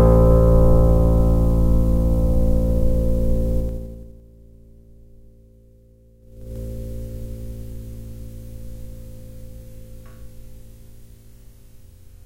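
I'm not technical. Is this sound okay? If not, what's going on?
No. There is zipper noise in two places. From 3.56 to 4.23 s the volume drops a long way. From 6.2 to 6.57 s it comes back up. Each time the change is made in small jumps instead of one smooth slide. Every jump leaves a tiny click. The clicks come about ten times a second on the way down and about twenty on the way up. Together they make a ticking, zipping sound on top of the audio.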